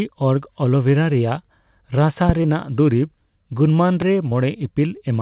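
At 2.29 to 2.32 s a loud pop, roughly 15 dB above the speech, punches through as a single sharp thump, likely a voltage pulse from a switch, plug or static. A brief smear follows at 2.42 to 2.46 s, short concealed packet loss where about 20 ms never arrived and the receiver stretched the preceding sound to cover it. A second, softer loud pop, roughly 10 dB up, lands at 4.02 to 4.04 s. Another concealed gap of about 20 ms wobbles the sound at 4.30 to 4.33 s, within a call band that stops at 4 kHz.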